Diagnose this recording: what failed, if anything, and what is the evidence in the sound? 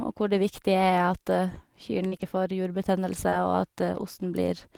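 The network dropped packets here, and you can hear the receiver covering for it. There's short concealed packet loss at 2.07 to 2.14 s and again at 3.30 to 3.34 s, right after "får jurbetennelse". The first hole is about 40 ms and the second about 20 ms. Both times the decoder extended the last bit of sound to fill the gap and then crossfaded back into real audio, so you get a quick smear or wobble instead of a dropout.

Overlapping those spots there's a lost packet rebuilt from error correction, from 2.12 to 2.22 s, just before "får jurbetennelse", and at 3.32 to 3.34 s. The first rebuilt stretch is about 60 ms, which fits roughly three lost packets, and the second is about 20 ms. This is Opus in-band forward error correction at work. The following packets carried low-bitrate copies that the decoder played in place of the missing frames, so nothing goes silent, but those frames sound rougher and noisier than the audio around them.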